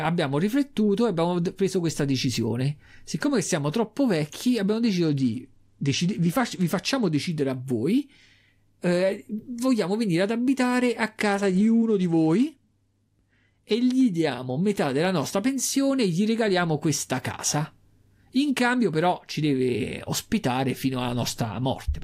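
At 5.05 s, after "siamo troppo vecchi abbiamo", a Bluetooth SBC bit pool drop sets in: a congested link forces the encoder to spend far fewer bits, which points to the bit pool falling from about 28 to 12, near 96 kbps. The top sub-bands lose their bits, so the treble dulls and gritty quantisation noise rises until 7.33 s, before "a voi". The same drop recurs from 11.20 to 13.74 s, between "venire ad abitare a" and "gli diamo metà della".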